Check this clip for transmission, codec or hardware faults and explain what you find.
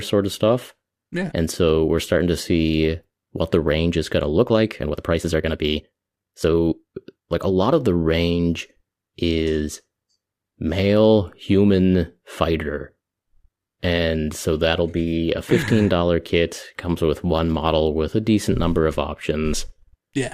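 One fault stands out: a time-stretched section. From 4.35 to 7.75 s, the speech suddenly runs 1.42 times faster at unchanged pitch. Software likely squeezed it by dropping short pieces, so it sounds rushed.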